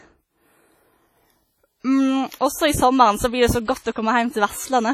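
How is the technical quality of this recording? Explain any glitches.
The technical quality is poor: the speech carries heavy codec damage from start to finish. Throughout the clip there is a ringing, washy smear with hiss that swells and fades along with the voice, most likely from WMA compression at a low bitrate, consistent with about 32 kbps. The transform coder spreads quantisation noise over tens of milliseconds and zeroes weak components. A spectrogram would show a hard ceiling at about 16.6 kHz, patchy gaps between harmonics, and blurred smears around onsets.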